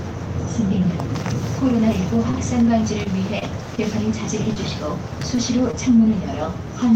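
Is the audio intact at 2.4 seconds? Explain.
Yes. Nothing is missing at 2.4 s. Just before it, from 2.31 to 2.35 s, a short stall from a late packet occurs: the receiver held the preceding sound for about 24 ms until the delayed packet arrived, leaving that sound held too long with a slight buzz or dip, which shows as a brief horizontally stretched band on a spectrogram.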